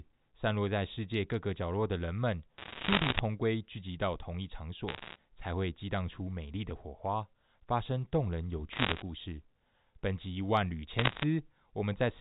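Bit errors on a digital phone line crackle through the speech at 2.58–3.2 s, 4.88–5.16 s, 8.72–9.02 s and 10.99–11.24 s. Roughly a percent or two of bits flip, each corrupting one G.711 sample, and hits on high bits give sharp ticks. Unlike packet loss, nothing drops out; the narrowband speech continues underneath.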